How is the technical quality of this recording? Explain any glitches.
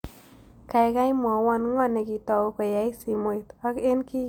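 No technical faults can be heard anywhere in the recording, and the signal stays continuous and stable throughout.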